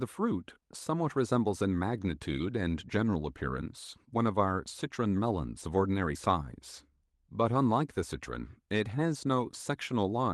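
Nothing stood out on listening: the speech comes through the call's codec and jitter buffer path without any audible trouble at any point.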